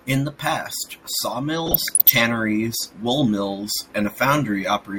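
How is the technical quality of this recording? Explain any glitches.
The recording has one fault, a short stretch of DAB burbling in the speech from 1.66 to 2.12 s. Weak digital radio reception lets bit errors slip past the error correction into the MP2 data, with a density that points to roughly half a percent of bits wrong. Corrupted samples put short blips of noise in single sub-bands, and corrupted scale factors make sub-bands leap in level for up to a frame, so for that half second the speech is overlaid with burbling noise.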